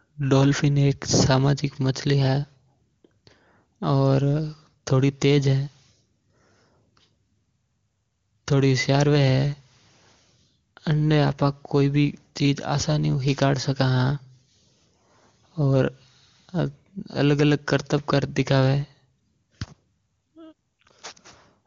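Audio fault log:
No faults found in the speech, which was carried over an AMR wideband (HD Voice) link whose coding leaves little or no audible trace.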